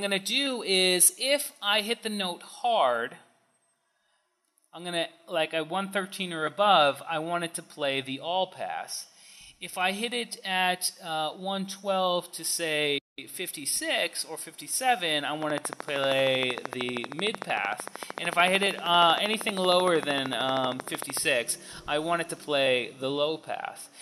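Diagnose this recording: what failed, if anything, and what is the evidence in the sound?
A train of clicks runs from 15.42 to 21.18 s: regular ticks at 13 per second, around seventy in all, standing roughly 15 dB above the sound, audible in the gaps too. The likely stage is analogue wiring or the interface picking up periodic interference. A spectrogram shows evenly spaced thin vertical broadband lines, and the waveform shows matching sharp spikes.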